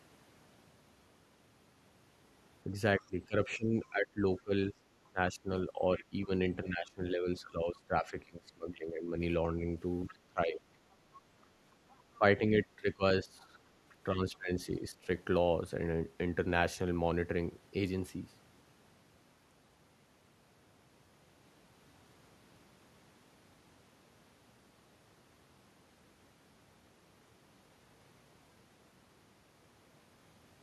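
From 2.73 to 6.3 s, 6.64 to 9.18 s, 10.08 to 10.6 s, 12.18 to 13.57 s and 14.15 to 15.08 s, the speech sinks by up to about 20 dB. This is speech suppressed in double talk, likely an echo canceller turning the talker down while the far end spoke at the same time.

At 5.98 to 6.22 s and again at 10.09 to 10.17 s, brief, faint scraps of a second voice come through, roughly 25 dB below the speech. This is the other side's voice leaking through, likely loudspeaker echo that the canceller did not fully remove from the microphone.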